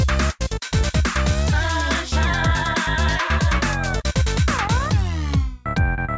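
Nothing's wrong here; the sound simply comes through a wideband call connection, so there's nothing up above 8 kHz, which is just how that path carries audio.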